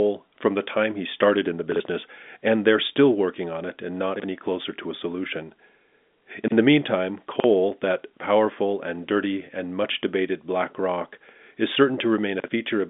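At 1.72, 4.16, 6.44, 7.36 and 12.4 s there are chunks out of order: a 40 ms slice plays one slot late, so each 80 ms stretch sounds jumbled. The one at 4.16 s falls between "working on it and" and "closer to a solution", and the one at 7.36 s between "the meantime" and "that powerful and dirty", all heard through the telephone band of the G.711 line.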